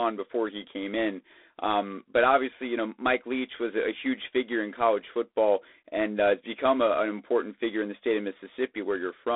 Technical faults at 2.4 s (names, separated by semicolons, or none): G.726 ADPCM